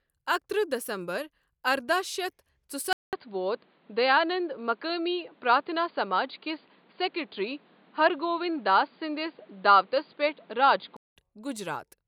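After a 200 ms gap at 2.93 s, speech turns dull until 11.17 s, likely from the input switching to a poorer device. The spectrogram is empty above 4.8 kHz.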